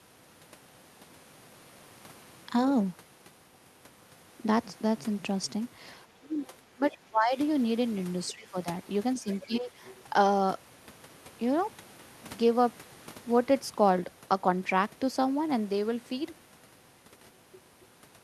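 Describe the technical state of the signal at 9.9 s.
Around 9.9 s a brief, faint second voice sits under the main talker, from 9.86 to 9.90 s, roughly 25 dB below the speech. It is the other side's voice leaking through. The likely cause is that the talker's device was playing the far end on a loudspeaker, and the microphone picked that playback up again. The echo canceller then left a short residue of it in the outgoing signal instead of removing it entirely.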